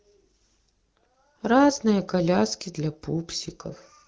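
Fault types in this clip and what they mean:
The speech carries no technical faults, passing through an AMR wideband (HD Voice) codec at 12.65 kbit/s, a rate at which the coding leaves only light traces on the signal.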